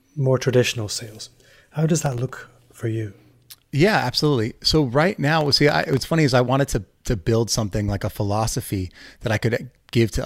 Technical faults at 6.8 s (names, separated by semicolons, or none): none